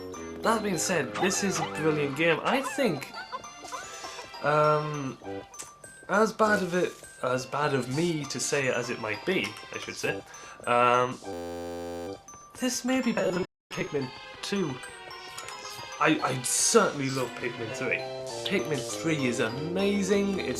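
From 11.33 to 12.07 s a system hang loop takes over. The machine froze while the hardware kept replaying one 11.61 ms slice, which fits a 512-sample buffer. It sounds like a steady buzz at 86.1 Hz. A spectrogram shows evenly spaced harmonic lines, and the waveform shows identical repeating cycles.

At 13.45 s the sound cuts out in a playback stall of 255 ms, ending at 13.71 s. The player was likely starved of data or had its thread blocked. The waveform drops to a flat line, and the spectrogram shows a blank vertical gap across all frequencies.

From 13.71 to 16.25 s, time-compressed catch-up runs the audio at 1.1 times normal speed to clear the backlog. Pitch stays put, but the sound feels hurried. The spectrogram shows features packed closer together in time, with small seams where pieces were cross-faded.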